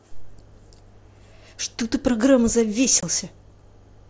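At 3.00 to 3.03 s the speech cuts out for about 22 ms, an unconcealed Bluetooth headset packet loss. The gap, which fits three lost mSBC frames, is filled with silence or an idle pattern rather than patched, so its edges are abrupt instead of smearing like concealed loss.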